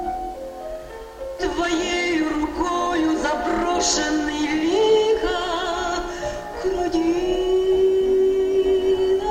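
Throughout, grainy distortion tracks the sound, likely low bit depth without dither, near 8 bits, rounded; the waveform shows visible steps, the spectrogram a signal-following noise floor about 40 dB down.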